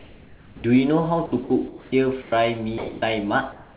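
From 0.00 to 0.64 s the room background is replaced by comfort noise, likely from discontinuous transmission. It is a smooth, featureless hiss about 7 dB quieter than the room noise. On a spectrogram it shows as an even, textureless wash, band-limited at 4 kHz like the rest of the clip, which fits a narrowband call path.

At 0.56 to 0.64 s the onset is clipped by the voice detector, likely because it reacted late. The first 80 ms never arrive, so the sound jumps in abruptly. The waveform shows a hard start with no gradual rise.

Sound is dropped by the voice detector at 1.26 to 1.32 s and 1.44 to 1.50 s (60 ms each), and at 2.78 to 3.02 s, where 130 ms of sound is lost within a 240 ms gap. The detector likely judged the quiet sound to be background. Each gap reads as flat noise cutting into the speech energy, visible as brief low-level notches in the waveform.

Comfort noise returns at 1.68 to 1.92 s (about 2 dB louder), 2.22 to 2.32 s (about 2 dB quieter) and 3.52 to 3.76 s (about 2 dB louder). 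Each stretch shows the same uniform spectral smear in place of the room's detail.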